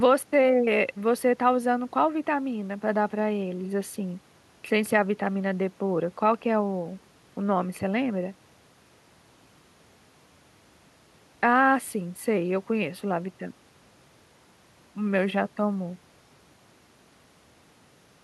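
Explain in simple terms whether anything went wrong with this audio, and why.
Nothing stood out as wrong on listening to this speech recording.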